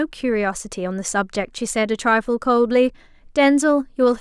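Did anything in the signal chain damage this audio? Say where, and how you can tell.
No, nothing in the signal chain damaged this audio.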